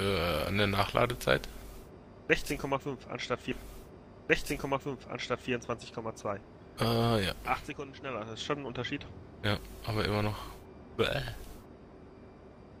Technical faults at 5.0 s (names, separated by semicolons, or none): stream segment repeated